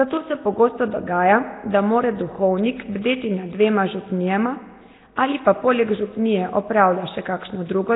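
Throughout the speech, the sound is rough and hissy, with a smeared, underwater quality. Nothing reaches above 3.8 kHz. The likely cause is heavy Nellymoser compression, which fits a rate near 16 kbps. Weak bands get no bits and are filled with noise.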